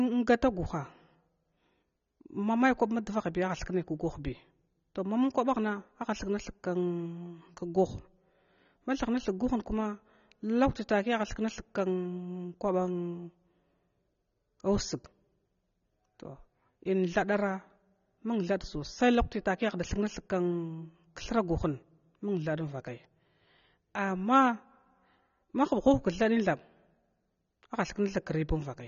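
AAC compression runs throughout: nothing reaches above 6.9 kHz, leaving the speech dull and warbly, likely from AAC-LC coding at a low bitrate near 24 kbps.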